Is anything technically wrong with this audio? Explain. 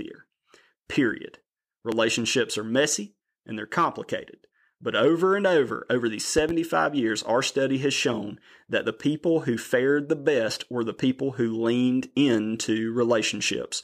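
Yes, there is a loud pop twice. At 1.92 to 1.96 s there is a single sharp pop. At 6.38 to 6.52 s, between "and over over these" and "years our study has", two come in quick succession. Each peaks well above the speech, which carries on underneath. That continuity sets the pops apart from a dropout or edit glitch. They are likely voltage steps, from a plug, switch or static, that the downstream circuits shaped into brief thumps.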